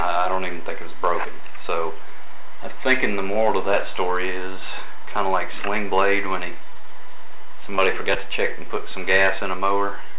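At 6.70 s a packet arrived late, so the jitter buffer briefly ran dry and the receiver held the last sound for about 15 ms before picking up where it left off. A second short stall from a late packet follows from 6.74 to 6.89 s, where the delay shifted by 17 ms and about 14 ms of held sound was added. Nothing is lost in either stall, but the audio drags slightly, with a faint buzzy sustain or dip.

Inside that stretch, at 6.81 to 6.85 s, comes the first short concealed packet loss. About 20 ms of audio never reached the decoder, and the receiver filled the gap by continuing the preceding sound before blending back. The same happens at 7.75 to 7.80 s and at 8.14 to 8.17 s. Each gap is heard as a brief smear or wobble, all within the G.711 call path's band, which stops at 4 kHz.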